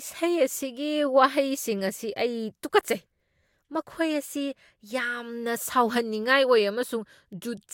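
No dropouts, clicks, level jumps or timing glitches turn up anywhere in the recording.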